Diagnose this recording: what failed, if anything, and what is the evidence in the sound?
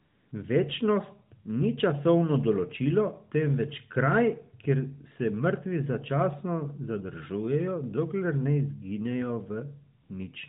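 The sending side's discontinuous transmission judged the talker silent and stopped sending speech frames, a call-processing fault within the AMR codec's DTX path. The receiver substituted AMR comfort noise, synthesised from a coarse level and spectrum estimate. The real background disappears into a smooth, steady hiss from 0.00 to 0.32 s (about 315 ms) and again from 10.02 to 10.10 s (80 ms), switching in and out against the band-limited narrowband speech.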